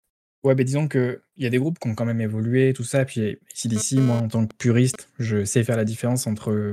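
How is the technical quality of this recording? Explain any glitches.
The recording has one interference fault, a GSM phone buzz, from 3.76 to 4.96 s, stopping just before "je sais". A nearby 2G handset transmits in bursts at about 217 Hz, and the audio circuitry rectifies those radio pulses into the signal. The result is a hard, raspy buzz rich in harmonics, unrelated to the speech and sitting about 11 dB below it. Its appearance as a single short burst points to a data transfer rather than a call.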